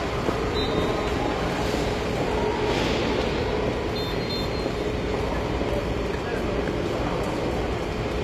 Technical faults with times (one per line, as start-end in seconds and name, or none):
0.00-8.23 HE-AAC compression